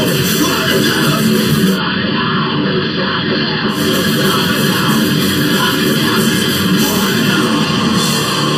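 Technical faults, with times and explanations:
Throughout: channel delay (comb filtering). One channel runs late by roughly 0.7 ms before the mono sum, so shared content cancels at evenly spaced frequencies, starting around 700 Hz. Those fixed notches give the whole clip a hollow, phasey colour.
1.66 to 3.83 s: digital radio blending to analogue. The receiver drops its digital signal and cross-fades over 144 ms to the station's AM broadcast, then fades back. During that stretch the level drops about 2 dB and hiss sits about 40 dB under the programme.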